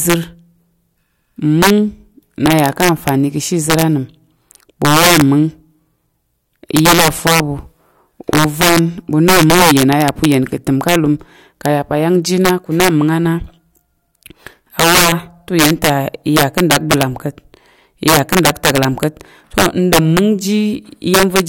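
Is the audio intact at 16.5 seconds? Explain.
No. Integer overflow runs through the whole speech clip, including 16.5 s: peaks driven about 12 dB too hot wrap to the opposite sign instead of limiting, producing violent cracks on loud moments.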